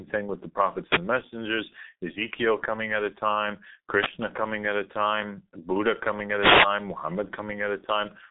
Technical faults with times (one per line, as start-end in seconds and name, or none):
0.00-8.30 G.723.1 codec
0.81-1.08 wireless microphone noise hit
3.94-4.16 wireless microphone noise hit
6.36-6.72 wireless microphone noise hit